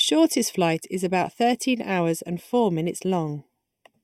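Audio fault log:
throughout: channel delay (comb filtering); one channel lags about 0.4 ms, and the mono sum cancels evenly spaced bands from around 1.5 kHz, sounding hollow.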